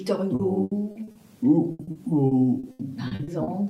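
Repeated packet loss (robotic sound) runs from 0.35 to 1.18 s and again from 1.71 to 3.50 s. Short holes of up to 80 ms recur, filling nearly 30% of each stretch. Each hole is patched by extending the preceding sound, so the result is choppy sound with pieces missing rather than the clean silences of plain dropouts.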